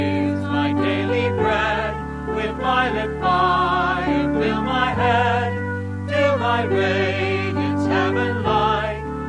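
Nothing stood out as a technical fault on listening.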